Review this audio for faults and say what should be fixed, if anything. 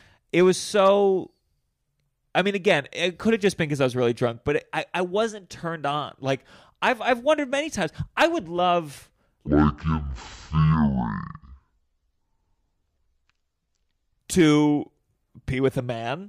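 From 9.48 s to 14.20 s, right after "times I would love", the speech drops to half speed and sits a full octave lower. This is stereo read as mono. Interleaved left and right samples were taken as one channel, in sequence. Each stereo frame became two mono samples. The same stretch of audio therefore takes twice as long to play, and every frequency halves, giving the 12-semitone drop. That section should be re-decoded with the correct channel count. To prevent it, check that the declared channel count matches the stream before decoding.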